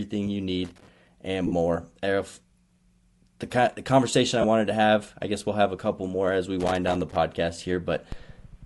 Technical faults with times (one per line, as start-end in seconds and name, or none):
0.00-8.66 Bluetooth LC3 compression
0.64-0.88 loose connector crackle
1.47-1.53 lost LE Audio frames
4.42-4.44 lost LE Audio frames
6.60-7.16 loose connector crackle